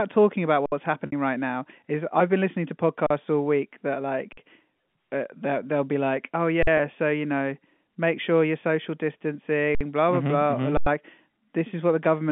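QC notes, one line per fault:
0.66 s, 3.07 s, 4.33 s (after "all week that"), 6.63 s (between "they'll be like oh" and "so you know make"), 9.75 s, 10.77 s: underrun with held sample. The sound freezes flat for 39 to 93 ms, then carries on where it stopped with only a soft click. The output buffer ran dry and the converter held its last value; 46 and 93 ms gaps fit 2048- and 4096-sample buffers.
1.06 to 1.13 s (before "right now is I've"), 6.77 s: packet loss with pitch repetition. The 60 ms gap sounds like a buzzy held tone fading toward silence, with speech cross-fading back in. The 20 ms one is a brief slightly held buzz. The receiver repeated the last pitch period to cover lost packets, consistent with three and one 20 ms packets.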